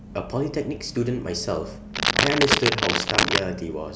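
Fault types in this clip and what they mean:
Cable scratch noise: dense, irregular crackling and rustling laid over the speech from 1.94 s to 3.43 s, lasting about 1.5 s and sitting roughly 5 dB above the speech level, so it partly masks it. The likely cause is a worn cable, connector or control being handled, so its contact resistance fluctuates quickly and injects uneven noise bursts into the signal path for as long as it is disturbed.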